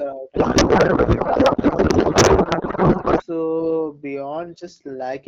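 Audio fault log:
0.35–3.23 s, codec payload misread: the speech gives way to garbled noise and warble that barely tracks it, then clears abruptly at 3.23 s. The frames decode as valid-looking AMR-WB but with fields in the wrong positions, which points to octet-aligned packing being read as bandwidth-efficient. Unlike packet loss, there are no gaps or concealment repeats, just continuous wrong sound until the packing matches again.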